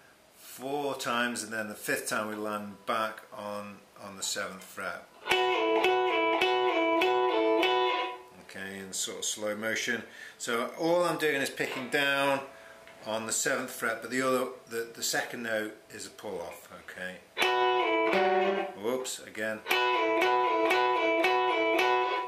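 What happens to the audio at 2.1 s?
Nothing goes wrong at 2.1 s; the audio plays through that moment intact, with no dropout, click or distortion.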